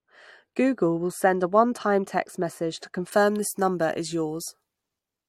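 Speech, dull and muffled from 0.0 to 3.12 s, shows de-emphasis applied wrongly: a treble cut meant to reverse pre-emphasis hit audio lacking it or was applied twice, sloping smoothly down to about 14 dB below 1 kHz at 10 kHz. Unlike a low-pass filter, there's no sharp cutoff, just gradual dulling.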